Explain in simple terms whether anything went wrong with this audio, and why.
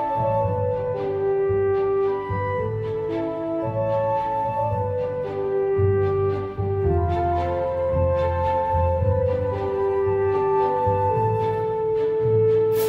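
Nothing went wrong here: no faults are audible anywhere in the recording.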